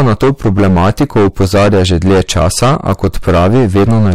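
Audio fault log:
throughout, hard clipping: the speech is driven about 15 dB past what the signal path can carry, so every peak is sliced off flat at the ceiling, and around a fifth of the samples sit pinned there. Those squared-off tops generate a spray of harmonics reaching high into the spectrum, which is why the overload is heard as a harsh, buzzing fuzz riding on every loud syllable rather than as occasional crackle.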